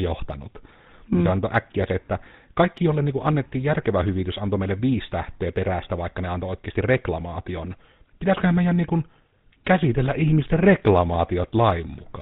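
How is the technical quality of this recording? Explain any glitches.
The quality is limited by a narrow, rough codec sound. Throughout, the speech is buzzy and gravelly with nothing above 4 kHz, the signature of the GSM full-rate codec, whose pulse-driven vocal-tract model at what fits 13 kbps discards fine excitation detail.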